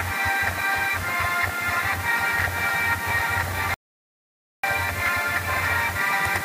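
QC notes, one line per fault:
3.74–4.64 s, audio dropout to silence: sound cuts to silence for about 0.89 s, likely a lost input link; waveform flatlines and the spectrogram goes fully blank.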